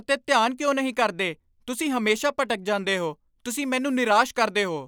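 No technical faults are audible anywhere in the recording; nothing to flag.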